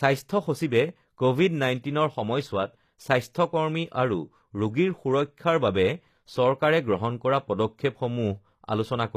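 From start to finish the speech has a gritty, metallic top end, with s sounds going lispy and nothing at all above 14.9 kHz. That's likely HE-AAC compression at a low bitrate, somewhere around 24 kbps, rebuilding the treble from copied lower bands.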